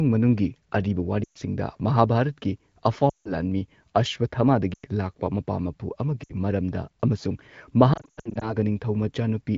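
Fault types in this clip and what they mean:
Lost AMR speech frames: at 1.23, 3.09, 4.74, 6.24 and 7.93 s, the wideband decoder patched corrupted frames with the last good settings at falling gain, so speech briefly smears and dips.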